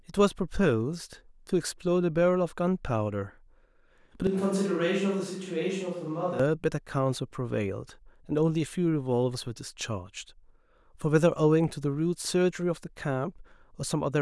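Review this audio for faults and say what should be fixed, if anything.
The close microphone likely dropped out from 4.27 to 6.40 s, leaving a distant microphone to carry the speech. This is a switch to a distant microphone. The sound abruptly turns roomy and hollow and loses bass. It falls about 5 dB, and room noise rises to roughly 35 dB below the speech, then it snaps back. Monitoring the close microphone's feed throughout recording, with a backup close track to patch from, would prevent this.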